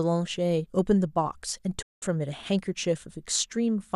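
At 1.82 s the speech drops abruptly into silence, with a quick fade of about 8 ms, and it stays muted until 2.03 s before picking up again further along. This is a digital broadcast dropout: the receiver stopped getting decodable frames, either because the signal was lost or because frames failed their checksum, so it muted rather than play corrupt data. About 192 ms of the programme is simply gone, which points to a run of roughly eight lost frames.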